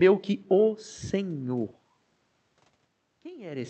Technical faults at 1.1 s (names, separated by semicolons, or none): none